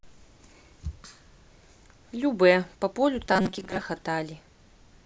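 From 3.26 to 3.81 s the speech takes on robotic sound from repeated short buffers: a rigid, metallic buzz at 188 Hz that loosely tracks the words. This is likely caused by audio arriving too slowly, with roughly half the sound replaced by repeats of a segment of about 5.3 ms.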